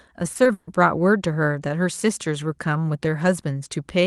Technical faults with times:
0.33-0.69 repeated packet loss (robotic sound)

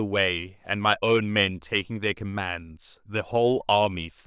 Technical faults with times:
none

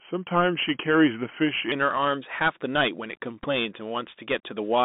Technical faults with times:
0.00-4.85 Bluetooth CVSD headset codec
0.00-1.72 section at the wrong speed
3.43-3.48 Bluetooth headset packet repeated

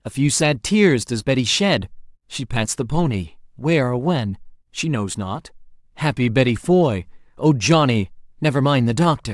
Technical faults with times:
none

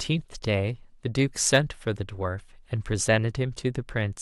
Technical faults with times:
1.47-1.57 hard clipping

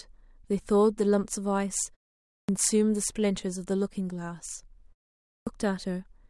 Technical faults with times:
2.31-2.49 clipped start after a pause
5.28-5.47 clipped start after a pause

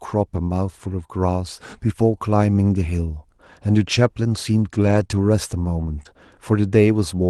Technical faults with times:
0.35-0.37 lost packet rebuilt from error correction
4.83-5.17 lost packet rebuilt from error correction
5.07-5.11 short concealed packet loss
6.03-6.07 short concealed packet loss
6.05 lost packet rebuilt from error correction

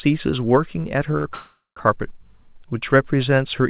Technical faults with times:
1.17-1.26 short stall from a late packet
1.34-1.78 call audio freeze

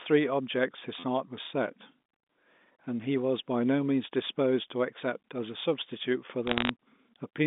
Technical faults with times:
1.00-1.03 repeated buffer
4.27 repeated buffer
6.47-6.69 bit errors on a digital phone line

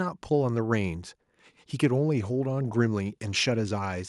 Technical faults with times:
none

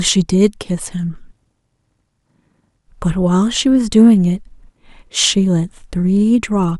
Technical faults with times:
none

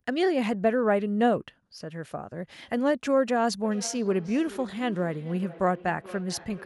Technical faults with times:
3.63-6.65 feedback echo between two devices

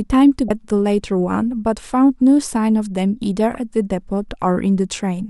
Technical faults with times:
0.47-0.50 damaged data in a compressed stream
3.54 damaged data in a compressed stream

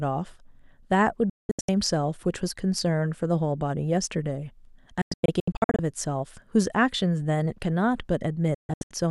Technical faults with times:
1.29-1.69 digital broadcast dropout
5.01-5.79 digital broadcast dropout
8.54-8.91 digital broadcast dropout

